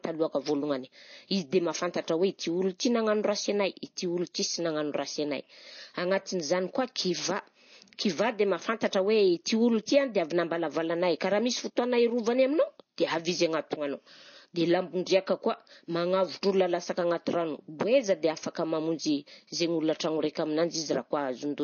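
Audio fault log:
Throughout: MP3 compression. Nothing is heard above 6.6 kHz, and plainly audible watery swirling runs through the speech. This is likely a starved MP3 encoder, around 32 kbps, cutting the treble and switching weak frequency lines on and off between frames.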